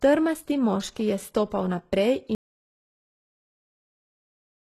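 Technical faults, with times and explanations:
throughout, HE-AAC compression: treble is rebuilt from copied lower bands, so sibilants turn gritty and nothing sounds above 12.3 kHz, likely from a bitrate around 16 kbps.
2.35 s to end, audio dropout to silence: speech cuts off into silence with no room tone, likely because input was lost while recording continued.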